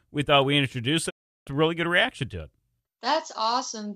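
After "thought we introduce it", a digital broadcast dropout fades to silence within 20 ms, 1.09 to 1.49 s. Nothing fills the gap until "really good reaction to".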